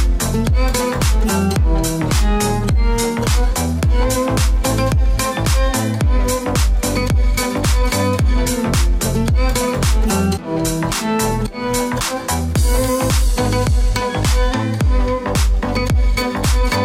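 From 2.01 to 3.51 s and again from 13.27 to 14.52 s, the sound slows by 5.6% and drops one semitone, then snaps back, likely a drift correction step. Unlike wow, the shift is a single steady jump with no wavering.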